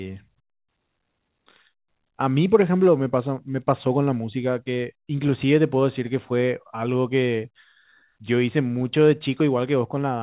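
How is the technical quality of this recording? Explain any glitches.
No glitches to report: the speech is band-limited with nothing above 4 kHz, which fits a 64 kbps G.711 A-law call path working as intended.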